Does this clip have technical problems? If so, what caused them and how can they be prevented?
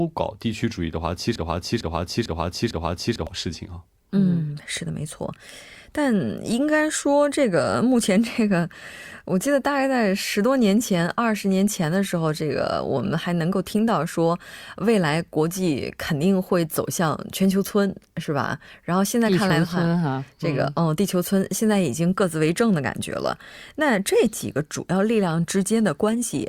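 Yes. The player, encoder or stream likely stalled and kept resending the last fragment it held, producing a broken-record loop from 1.36 to 3.27 s. A 450 ms piece of speech repeats exactly four times back to back, and the speech that belonged in that span is lost. Prevent it with a larger buffer plus a watchdog that outputs silence, rather than repeating stale data, whenever the stream stalls.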